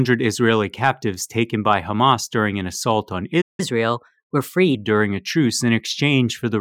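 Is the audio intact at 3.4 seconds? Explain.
No. Right after "during an assault on", a playback stall silences the speech from 3.41 to 3.60 s, a gap of about 0.17 s, likely because the player ran short of data or was blocked. Unlike a brief dropout, this silence is long enough to hear clearly as a halt.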